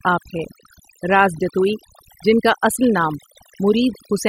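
From start to finish, the speech carries overdone noise removal. A noise reduction stage was pushed too hard on a noisy recording. It cuts individual frequency bands deep, or mutes them, whenever their level sits close to its noise estimate. Quieter parts of the voice fall below that line and are cut too. The background drops, broken by twinkling specks.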